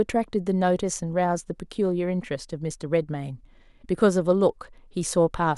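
No technical faults can be heard anywhere in the speech recording.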